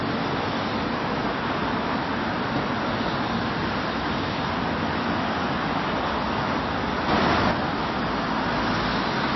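From the first second to the last, the treble stops dead at about 5.8 kHz, and what remains has a watery, swirling quality, with faint components flickering in and out and sharp attacks smeared. This points to MP3 compression, likely at a low bitrate, around 24 kbps: starved of bits, the encoder drops everything above a fixed cut-off and zeroes weaker frequency lines frame by frame. A plain low-pass filter would dull the top end without that shifting, bubbly texture.

At 7.08 s the whole signal, background noise included, steps up by about 5 dB in a single instant, holds at that level, and drops back just as abruptly at 7.51 s. This is a sudden gain jump, most likely a digital gain change applied without any ramp. Because sound and noise floor rise together and the edges are hard steps rather than a swell, it differs from someone simply playing louder or from a compressor's gradual pumping.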